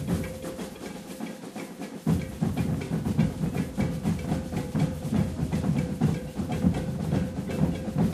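Nothing in this recording of sounds stood out as a technical problem on listening.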